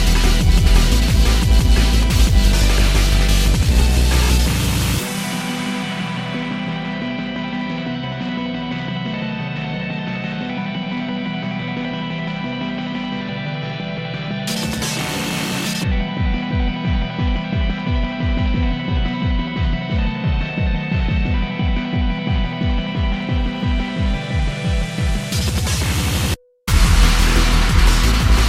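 Nothing in the audio points to a technical fault at any point.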